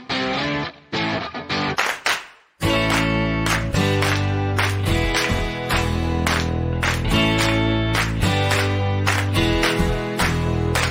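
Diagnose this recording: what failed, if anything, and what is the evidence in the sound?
The fault sits in sample-rate conversion: imaging from linear upsampling. The audio was raised from 24 kHz to 48 kHz by joining samples with straight lines, which filters poorly. So the top of the original band, near 12 kHz, sounds dulled, and a faint mirrored copy of the spectrum sits from 12 kHz to 24 kHz, roughly 30 dB down. It runs through the whole clip and is heard as a light metallic shimmer on the brightest, hissiest moments.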